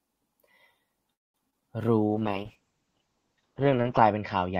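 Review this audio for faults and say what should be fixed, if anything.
From 1.13 to 1.36 s the speech stops in a call audio freeze. Packets were most likely held up in the network, so the jitter buffer ran dry and the receiver had nothing new to play. The last sound is stretched briefly, then falls to about 200 ms of silence before the speech picks up exactly where it left off. Nothing is lost, but everything after this point plays roughly 0.2 s later. A deeper adaptive jitter buffer, or a steadier network path, would absorb stalls of this length.

Two short concealed packet losses follow, at 1.50 to 1.54 s and at 1.60 to 1.63 s. In each, about 20 ms of audio failed to reach the decoder in time. The receiver patched the gap by extending the preceding sound and then blending back into the real signal. What you hear is a quick smear or wobble rather than a clean cut, and a brief consonant in either spot could drop out. 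Forward error correction or redundant packets would let the decoder rebuild short losses like these instead of guessing.

A call bitrate drop begins at 2.09 s and lasts for the rest of the clip. The call's bandwidth estimate fell, so the encoder was cut from 48 kbps to 8 kbps and held at that floor for about 1.9 s. At that rate Opus codes the speech much more coarsely and narrows the audio band from 20 kHz to 8 kHz. The result is muffled, dull speech with a rough, watery texture. Tuning congestion control so it recovers bandwidth faster, and keeping a higher minimum bitrate for speech, would stop the audio collapsing this far.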